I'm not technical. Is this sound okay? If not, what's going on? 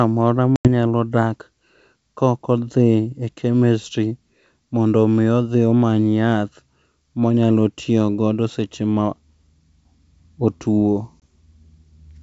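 No. There's packet loss on an ADPCM call. Twice, bits of the speech simply drop out and get replaced with silence: a gap from about 0.56 to 0.68 s, which sounds like roughly ten small packets gone, and a tiny blip near 11.2 s. Because this kind of coding builds each moment on the last, the decoder briefly loses track afterward, so the speech can come back with a click or slightly off in level before settling.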